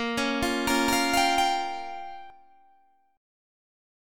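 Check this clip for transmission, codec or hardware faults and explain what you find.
One fault stands out: a doubled audio track between 0.70 and 2.30 s. A second full-band copy of the sound runs roughly a fifth of a second behind the original at about the same loudness, likely from the signal being captured again through a slower path. It sounds like a flat, dry slapback with no decay or room colour, switching on and off abruptly. A spectrogram shows every feature repeated as a shifted twin; the waveform shows duplicated envelopes.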